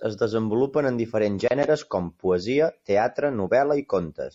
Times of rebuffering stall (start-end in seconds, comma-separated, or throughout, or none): none